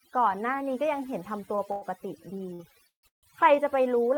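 Overdone noise removal runs throughout: an aggressive suppressor pulls frequency bands near its noise estimate far down, leaving a lowered, twinkling background.

Short stalls from a late packet occur at 1.55 to 1.60 s, 1.72 to 1.84 s and 2.54 to 2.61 s. The receiver stretched the last sound for 24, 99 and 52 ms, respectively, then resumed where it stopped, so each is heard as a held sound.

Call audio freezes occur at 2.87 to 3.05 s and 3.07 to 3.25 s. Each is a brief fading continuation of the last sound followed by about 120 and 130 ms of silence, respectively, before the audio picks up where it stopped. This is likely from packets held up until the jitter buffer ran dry.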